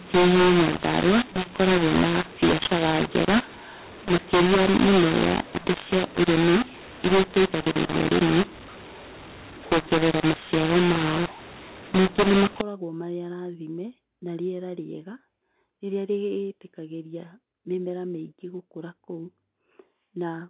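From the start to about 12.6 s the speech sounds harsh and gritty, with noise filling the pauses. That's a mu-law and A-law mix-up: mu-law telephone audio read back as A-law. The levels get scrambled and near-silent samples are pushed well up. After that the normal narrowband telephone sound comes back.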